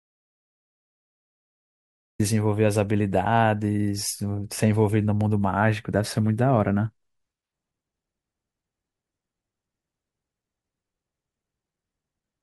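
The speech clip begins in dead silence that lasts until about 2.2 s, when the speech cuts in abruptly mid-flow, with no fade and no room tone beforehand. This is an audio dropout to silence that was already under way when the clip starts. The gap is silent, so the input was likely lost through a disconnected device, a failed link or a stray mute while the recorder kept writing, and whatever was said during those first two seconds is gone.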